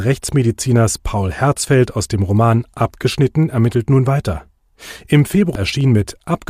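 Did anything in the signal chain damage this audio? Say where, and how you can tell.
Yes. At 5.55 s, a brief blip cuts into the speech. This is damaged data in a compressed stream, a codec or storage fault. The decoder hit corrupt bytes, misread the frame, lost sync, and recovered at the next frame header.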